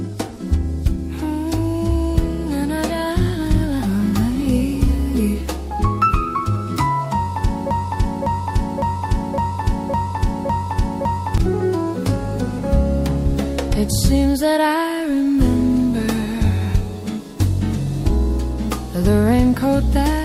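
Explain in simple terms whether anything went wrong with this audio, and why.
Broken-record loop from 7.71 to 11.38 s: a 0.56-second piece repeats seven times back to back, likely because playback stalled, so the audio meant for that stretch is missing.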